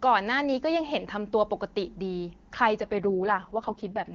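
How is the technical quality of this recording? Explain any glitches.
There's one clear glitch, an AMR rate drop near the end. Up to about 2.81 s the HD Voice (AMR-WB) coding sounds clean, with little or no audible codec damage.

From 2.81 s to 4.14 s the speech turns rough, raspy and more synthetic, though the bandwidth holds and nothing drops out. That fits the network telling the codec to step down from 23.85 to 6.6 kbit/s and spend the freed bits on error protection over a weak radio link.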